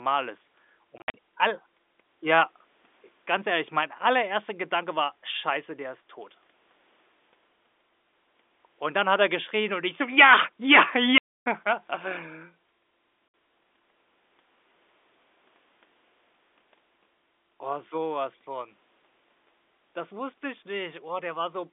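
Packet loss filled with silence cuts the speech at 0.98–1.14 s, just before "all ja", where 120 ms vanish in short holes up to 60 ms long, then at 11.18–11.46 s and 13.28–13.34 s. Each gap is a flat near-silent stretch on the waveform and a blank vertical band on the spectrogram, with hard edges and lengths that fit 20 ms packets.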